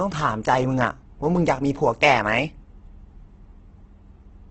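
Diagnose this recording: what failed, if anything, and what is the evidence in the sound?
Throughout, the speech sounds grainy and rough, with noisy texture replacing clean harmonics and nothing above 8.2 kHz. The codec stage is at fault, likely Opus compression in CELT mode: band energies survive but detail is noise-filled, which fits a starved rate near 12 kbps.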